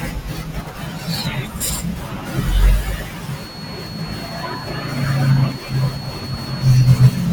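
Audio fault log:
3.29–7.33 s, feedback whistle: a thin, steady 4.4 kHz tone wavers well beneath the speech, likely a loudspeaker-to-microphone loop held just short of runaway.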